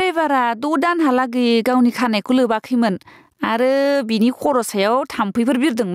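Gain pumping runs throughout: the input gain is likely set far too high, so a fast limiter keeps dragging the level down by about 20 dB, making the speech sound squashed.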